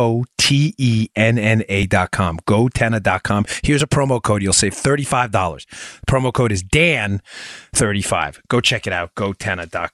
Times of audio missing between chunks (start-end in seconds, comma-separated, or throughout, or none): 1.83, 3.80, 5.78, 7.75